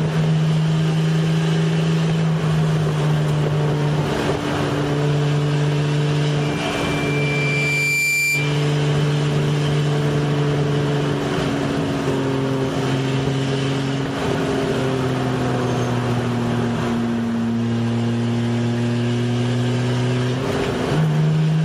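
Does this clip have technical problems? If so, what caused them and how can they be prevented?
Yes. Loudspeaker feedback squeal from 6.41 to 8.69 s: a 2.4 kHz tone swells over about a second and a half to roughly the level of the audio, as the microphone re-amplifies its own loudspeaker output. Prevent it by reducing gain or separating microphone and speaker.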